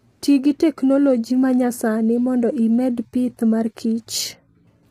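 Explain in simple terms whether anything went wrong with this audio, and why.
Yes, something went wrong, and it lasts through the whole speech clip. The voice sounds rough and grainy from start to finish. There is a hiss-like fuzz between the tones of the voice. The very top of the sound is missing, with nothing above about 16.3 kHz. This is likely low-delay AAC compression, the kind used in video calls. It chops sound into very short slices, so it cannot capture the voice's pitch cleanly, and squeezed this hard it smears detail into noise.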